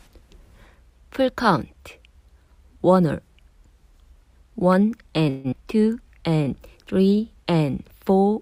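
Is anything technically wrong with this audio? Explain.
Yes, two faults are audible, both in the second half.

From 5.29 to 5.55 s there is what sounds like a long network dropout, with audio likely failing to arrive for about a quarter of a second. The receiver covers the gap by extending the last sound for about 225 ms, which is heard as a buzz that fades rather than dropping into full silence. When the audio resumes, about 120 ms of material is gone. The playout delay appears to shift by around 50 ms across the event.

From 5.99 to 7.18 s there is a jitter buffer slow-down. After the dropout the receiver needs to rebuild its reserve, so it repeats short pitch periods and slices of pauses many times in a row. This stretches the passage by 111 ms, so it plays at about 91% of normal speed. Pitch stays the same, but sounds are audibly drawn out and the timing feels sluggish.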